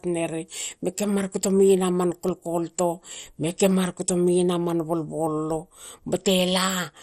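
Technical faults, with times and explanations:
Throughout, MP2 compression: the speech sounds dull with a gurgling, granular roughness, likely from heavy MPEG Layer II coding at a rate that fits about 56 kbps. Bit-starved sub-bands flicker off, so the spectrogram shows blocky patches and nothing above 15.8 kHz.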